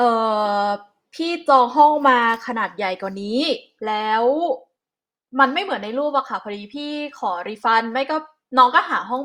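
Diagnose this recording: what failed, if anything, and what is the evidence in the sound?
Nothing failed: the sound gives no evidence of a fault at any stage of this speech recording.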